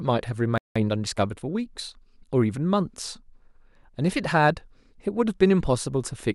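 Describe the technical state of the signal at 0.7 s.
At 0.7 s the speech is in a playback stall, silent from 0.58 to 0.76 s. The player likely ran out of data or was blocked for about 0.18 s. Then a time-compressed catch-up runs from 0.76 to 1.92 s. Small pieces are cut and cross-faded, so the speech sounds hurried at about 1.15 times speed, with normal pitch.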